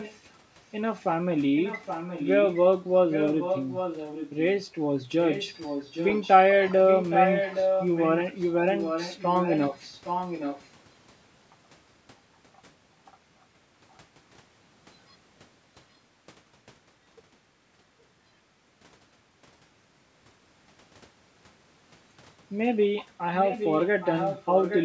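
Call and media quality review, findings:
Echo leak: delayed copy of speech at 0.0–0.18, 1.56–2.6, 3.1–4.3, 5.25–6.34, 6.87–8.11, 8.69–10.68, 23.41–24.85 s. Fixed 817 ms lag, mostly about 10 dB down, near speech level at 6.87–8.11. Likely far-end loudspeaker echo canceller residue. Discrete lagged repeat, not room reverb.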